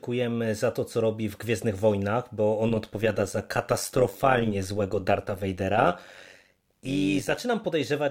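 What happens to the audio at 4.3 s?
At 4.3 s the speech sits inside a stretch of overlap-add ripple running from 2.68 to 7.41 s. Frames were rejoined with overlaps that don't sum to constant gain, so the level swings by about 11 dB around 100 times a second, giving a metallic buzz.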